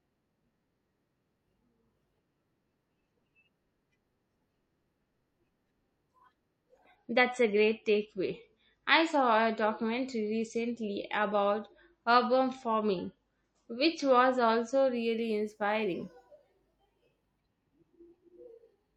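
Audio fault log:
6.95–14.95 s: adaptive stream at a lower bitrate. Quality drops abruptly with no gap: the top end vanishes, with nothing above 8.3 kHz, and the speech takes on a swirly, metallic edge as coding artefacts rise. The stream has switched to a lower-bitrate rendition while the connection slowed. The narrower band and coarser coding fit a move from around 128 to 32 kbit/s MP3. Full quality returns just as suddenly at 14.95 s.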